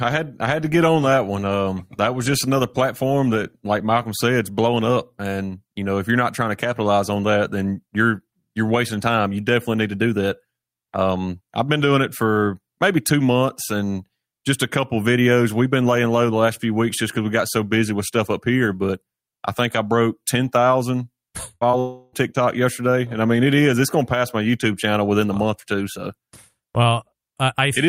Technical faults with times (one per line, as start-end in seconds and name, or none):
21.55-21.63 burst of packet loss
21.71-21.75 short concealed packet loss
21.79-22.14 long network dropout